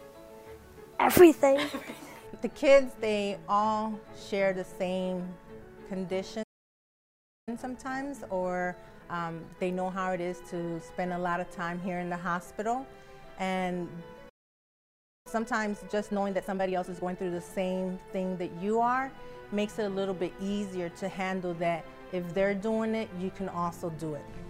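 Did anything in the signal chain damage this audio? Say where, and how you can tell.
Yes. The damage is at playback, in the player's buffer. There are two playback stalls. The sound cuts to silence at 6.43 s and returns at 7.49 s, a gap of about 1.04 s. It drops out again from 14.29 s to 15.27 s, about 0.96 s. Each time it stops mid-flow rather than fading. The likely cause is the player running dry of data, or its output thread being blocked, until it recovered.

Each stall is followed by time-compressed catch-up. From 7.49 s to 10.49 s the audio runs about 1.1 times normal speed. From 15.27 s to 17.17 s it is hurried harder, about 1.5 times. Pitch stays normal throughout. That points to the player trimming its backlog by cutting out short pieces and cross-fading across the joins, rather than simply resampling.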